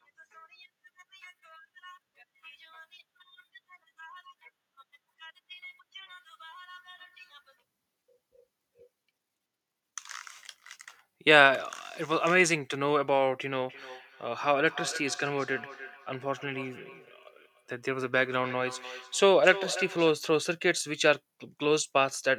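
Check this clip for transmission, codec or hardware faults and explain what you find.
One fault is present. From 13.66 to 20.24 s there is feedback echo between two devices: one device replays the other's microphone, which recaptures it. Its canceller ignores it, so speech returns roughly every 300 ms at about -15 dB. On a spectrogram this appears as faint, evenly spaced copies trailing each syllable.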